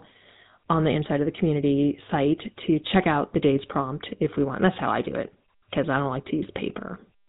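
GSM full-rate codec damage runs through the whole recording, from the first second to the last. The speech has been squeezed through the original GSM model, which rebuilds the vocal tract as a filter and excites it with a sparse, regular pulse train, keeping only a third of the excitation detail. Nothing survives above 4 kHz, so the voice sounds narrow and dull, and the thin excitation gives it a plainly audible buzzy, gravelly grain, which fits the 13 kbps full-rate mode.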